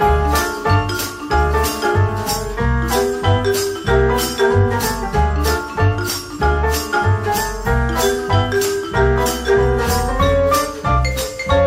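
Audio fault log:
Nothing to log here, as there's nothing in this audio that calls for a note.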